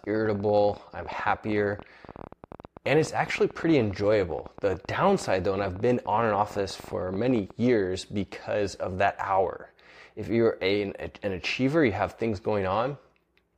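From 0.04 s to 7.51 s, a train of clicks runs under the speech, ending just before "years because of that". The pulses arrive at about 16 per second with uneven spacing, roughly a hundred in all, each with much the same sharp shape and peaking a few dB above the speech. They read as a ragged ticking that continues through the pauses. The cause is likely electrical interference from nearby equipment or a faulty connection or power supply.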